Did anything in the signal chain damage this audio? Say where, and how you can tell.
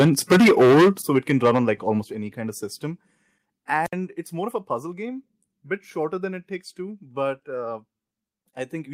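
Yes. Microphone overload at the input converter: from 0.0 to 0.89 s the peaks are flattened hard, about 14 dB over full scale with roughly a third of samples clipped, then again from 1.15 to 1.59 s, about 6 dB over and lightly clipped. It's likely input gain set too high.

Microphone volume stepped down in call processing: at 1.02 s the whole level drops by about 10 dB, voice and background together, right after the first clipped stretch. A second step of about 6 dB comes at 2.04 s, just before "any kind of system". This is likely automatic gain control cutting the device's input volume.

Wireless microphone squelch dropout on the analogue radio link: at 3.84 s a burst of hiss gives way to a near-silent hole of about 63 ms, and the signal comes back at 3.93 s with "it's more of a". The FM carrier faded until the receiver's squelch muted the output.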